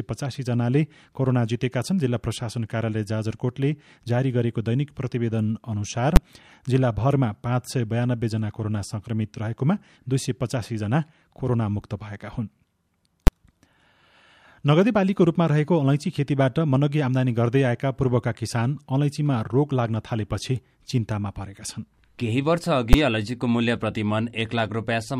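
At 6.16 s, 13.27 s and 22.93 s the speech is broken by a single loud bang, each time the same fault: invalid numbers at full scale. A calculation produced infinite or invalid values, and these were forced to the largest possible sample value for a 10 ms block. Because the block is so short, the pop at its start and the pop at its end merge into one. This differs from ordinary clipping, which flattens loud peaks of the sound itself. Here the output jumps to the limit regardless of the speech level.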